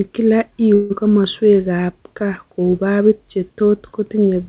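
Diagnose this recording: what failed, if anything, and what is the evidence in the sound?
Network stage, likely a long network dropout. From 0.74 to 0.92 s, a fading buzz continues the last sound, standing in for 160 ms that never arrived.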